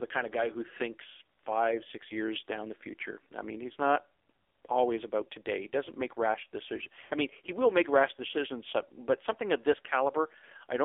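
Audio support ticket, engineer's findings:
AMR narrowband mobile codec, whole clip: speech band-limited to roughly 0.3 to 3.5 kHz, buzzy and synthetic timbre consistent with a low AMR-NB mode near 6 kbps. Spectrogram shows empty space above 4 kHz and smeared, pulse-like harmonics from the sparse excitation model.

Lost AMR speech frames, 7.06 to 7.11 s, after "doesn't make rash decisions" and before "I mean he will": about 40 ms of drawn-out, decaying sound, which fits two 20 ms frames concealed by repeating the last pitch and filter settings at falling gain. Waveform shows a brief tapering envelope before normal level resumes.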